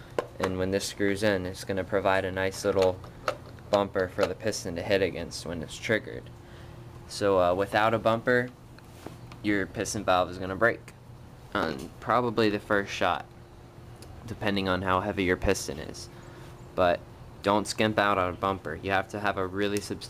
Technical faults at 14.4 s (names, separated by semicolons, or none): none